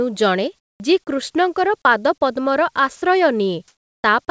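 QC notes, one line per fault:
0.59–0.80 s and 3.68–4.04 s, comfort noise in place of the background: during pauses the real background, sitting about 48–49 dB below the loudest sound, gives way to a smooth, featureless hiss lasting 210 ms and then 360 ms. The first patch is about 9 dB quieter than the surrounding background and the second about 7 dB louder. This is likely discontinuous transmission. The sender went silent when it judged there was no speech, and the receiver synthesised roughly shaped noise in place of the lost room detail.
0.78 s, onset clipped by the voice detector: about 20 ms at the start of the returning sound is missing, so it begins abruptly without its soft attack and emerges straight out of the synthetic noise. The likely cause is a voice detector that was slow to register the restart. The sender withheld those first moments, and the receiver kept playing comfort noise until real audio arrived.
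2.96–3.02 s, sound dropped by the voice detector: a 60 ms stretch is replaced by steady noise, and about 50 ms of actual sound vanishes before it resumes. The likely cause is the detector mistaking the sound for background and briefly halting transmission, so the receiver filled the gap with comfort noise. Across the whole clip nothing is heard above 8 kHz, which fits a G.722 call path at 64 kbps.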